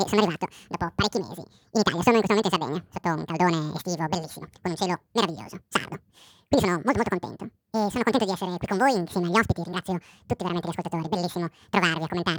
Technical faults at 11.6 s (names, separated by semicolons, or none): audio read two samples at a time (double speed)